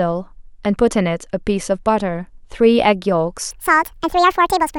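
From 3.51 s to the end, a section at the wrong speed runs 1.7 times fast, likely from a clock mismatch. Speech rises in pitch and hurries together, unlike a pure pitch shift.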